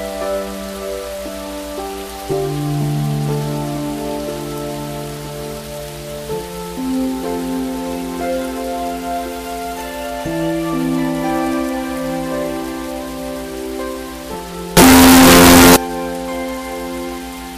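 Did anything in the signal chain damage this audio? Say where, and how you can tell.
Yes: signed and unsigned mixed up, 14.77 to 15.76 s. Very loud, harsh distortion makes quiet parts as loud as the rest, likely from sample-format conversion flipping the top bit of 16-bit samples.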